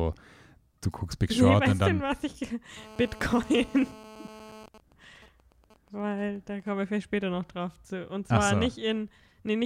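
Speech runs through the clip, and from 2.77 s to 4.66 s a GSM phone buzz sits under it. It is a hard, raspy tone at 217 Hz, full of harmonics. It stays steady, about 20 dB below the speech, and has nothing to do with what is said. A 2G phone in a call nearby is the cause. It transmits in radio bursts 217 times a second. Something in the audio circuit rectifies those pulses into sound. At 4.68 s the buzz gives way to GSM signalling bursts, which last until 6.96 s. Now the interference is broken up. It comes as even ticks with a longer 217 Hz buzz twice a second. It is quieter, roughly 25 dB down. The phone is still in the call, but its user has gone silent. It then sends only short groups of bursts, and the circuit rectifies each group.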